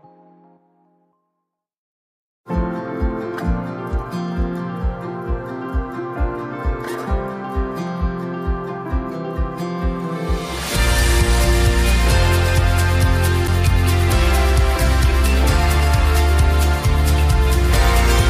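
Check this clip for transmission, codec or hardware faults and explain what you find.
One fault, a CD skip at 13.47 s. A knock or a flaw made the laser jump to another turn of the disc's spiral, so playback briefly mutes for several milliseconds and resumes from a different point, heard as a small tick followed by an abrupt jump in the sound.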